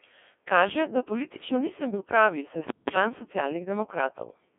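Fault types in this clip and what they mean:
Codec 2 vocoder: the speech is rebuilt from sine waves using only pitch, voicing, energy and spectral envelope, giving a heavily robotic, buzzy tone that fits a 1.6 kbit/s mode. Plain telephone filtering also cuts off near 3.4 kHz but keeps the natural waveform.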